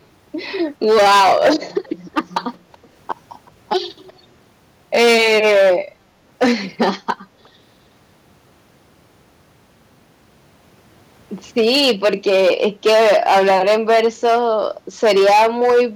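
Harsh fuzz grips the loud syllables from 0.84 to 1.78 s and from 2.17 to 2.37 s. This is hard clipping: peaks driven about 9 to 14 dB beyond the limit are sliced flat. Faint, delayed scraps of the speech follow at 2.54 to 2.87 s, 3.47 to 3.51 s and 4.07 to 4.19 s. This is likely an echo leak, where a loudspeaker's echo canceller let its microphone return the speech about 0.37 s late and far quieter. The clipping fuzz returns at 4.95 to 5.75 s and 6.42 to 7.11 s, another echo scrap appears at 7.44 to 7.49 s, and the fuzz comes back at 11.58 to 14.67 s and 15.03 to 15.83 s.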